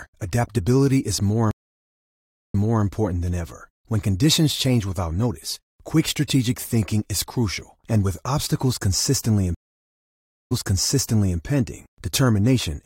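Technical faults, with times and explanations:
1.51–2.84 s and 9.55–11.39 s, stream reconnect: The connection dropped and the sound cuts to silence, for about 1.0 s and then about 0.96 s. The player reconnected and started a new decoder mid-stream. The server resent a burst, so playback resumes behind where it stopped. The first return repeats about 0.3 s of audio; the second repeats about 0.88 s. Each restart enters softly, fading in over its first frame.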